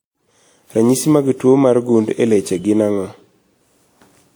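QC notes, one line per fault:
throughout: generation loss. The speech sounds swirly, hollow and smeared, with softened consonant attacks, more degraded than a single encode at this quality would be. The likely cause is repeated lossy encoding, around four passes of a WMA-style codec near 96 kbit/s, each requantising on a shifted frame grid so that errors accumulate. A spectrogram shows nothing above 20.1 kHz, and the waveform's onsets look blurred.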